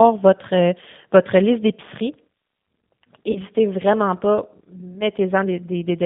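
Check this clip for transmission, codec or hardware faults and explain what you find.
Two faults are audible: a low-bitrate speech codec throughout and one concealed packet dropout.

G.729 codec, whole clip: the 8 kbit/s model-based coding leaves speech rough and synthetic. A spectrogram shows nothing outside roughly 150 Hz to 3.6 kHz.

VoIP packet loss concealed by the speech codec, 3.31 to 3.38 s: about 40 ms is missing, which fits two lost 20 ms packets. The decoder extends the previous pitch and filter into a fading buzz or coloured noise. On a spectrogram this looks like flat, smeared harmonics, and the waveform shows a short, shrinking envelope.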